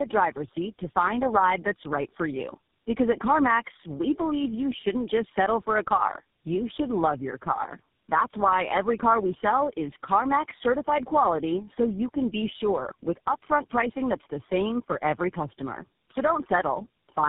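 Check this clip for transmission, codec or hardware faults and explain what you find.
One fault is present, and it lasts the whole clip: tandem speech coding. The speech went through four speech codecs in a row: iLBC, AMR-NB at 10.2 kbit/s, AMR-NB at 7.4 kbit/s, then GSM full rate. It was decoded to G.711 between each. Every coder re-coded the last one's damage. The speech sounds rough, muffled and warbly. Nothing is left above 3.7 kHz.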